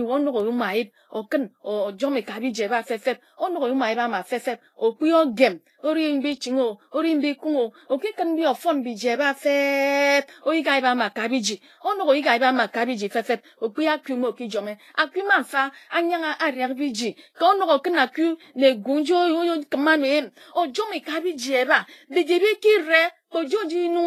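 From start to finish, the speech has nothing above 14.2 kHz, and carries the smeared, watery texture of a heavily squeezed encoding, although the file itself is a roomy MP3. That mismatch points to low-bitrate audio saved at a high bitrate: the material was likely first squeezed by a lean codec, which fits around 31 kbit/s Vorbis, then rewrapped at a generous rate that cannot restore the lost detail. Unlike a simple low-pass filter, the artefacts persist below the cut-off.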